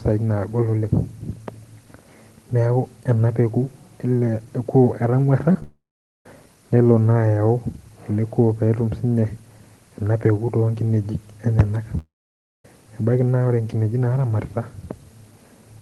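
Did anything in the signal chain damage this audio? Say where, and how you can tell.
Yes, the damage happens at the network stage.

Short concealed packet loss at 5.52–5.56 s and again at 5.61 s: about 20 ms and then 10 ms of audio failed to arrive in time. The decoder bridged each gap by extending the preceding sound, leaving a brief smear or wobble before blending back.

Long network dropout at 5.63–6.26 s and 11.98–12.65 s: the sound stretches into a fading synthetic buzz or hiss, then goes silent for roughly half a second (about 0.45 s and 0.56 s) before resuming further on. This is likely a stalled stream whose missing audio was never recovered.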